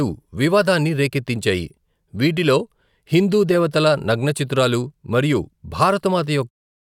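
No technical faults are audible.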